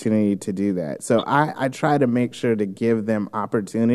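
A short bit of speech with nothing technically wrong to point to anywhere in it.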